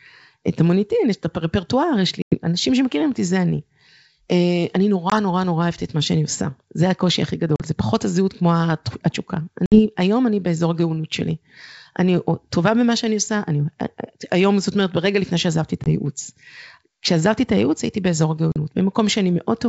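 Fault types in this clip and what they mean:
Packet loss on an ADPCM call: six abrupt silent holes of 20 to 100 ms, then speech returns slightly distorted while the decoder's predictor catches up.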